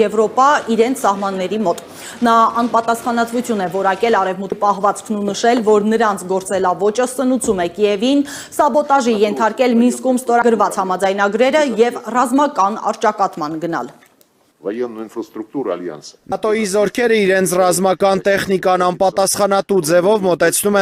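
At 4.52, 10.42 and 16.32 s the sound jumps ahead, losing roughly a tenth of a second each time, six seconds apart: likely audio missing between chunks.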